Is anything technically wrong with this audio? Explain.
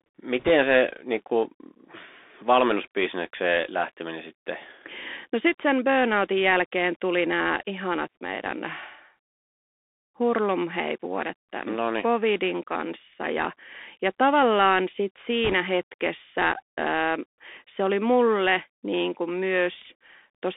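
Yes. The whole speech clip passes through a Bluetooth CVSD headset codec: a one-bit delta coder that tracks the waveform with an adapting step, which fits a 64 kbps link. The band runs only from 250 Hz to 3.6 kHz. Fast, loud high sounds outrun the step, so sibilants turn scratchy, with a grainy hiss beneath.

Bit errors on a Bluetooth voice link occur from 0.39 to 0.51 s, just before "se niin kuin", and from 15.44 to 15.54 s, between "ja ja tavallaan sit" and "hetkessä ö". Flipped bits each nudge the waveform and fade out rather than clicking. They leave a rushing crackle, heavier in the first burst (roughly 3 percent of bits) than the second (about half that).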